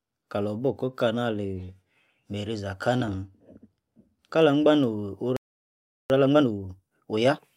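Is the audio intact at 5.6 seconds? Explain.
No. At 5.6 s the audio sits inside a playback stall running from 5.37 to 6.10 s, likely because the player ran short of data or its thread was held up. The speech cuts out mid-flow right after "kah angban no'h", leaving about 0.74 s of silence before it resumes.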